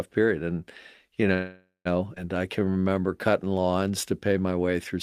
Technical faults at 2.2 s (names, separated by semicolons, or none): skip ahead